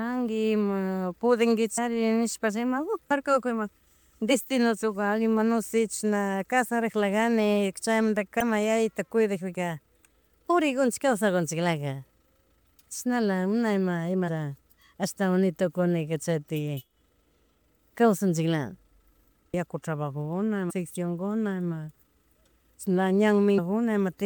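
A speech clip with damaged data in a compressed stream: brief glitches at 1.77, 8.40, 14.27 and 23.57 s, and at 20.69 to 20.71 s just before "kuna ima". Corrupted frames made the decoder lose sync, showing as thin broadband vertical streaks and sudden waveform discontinuities.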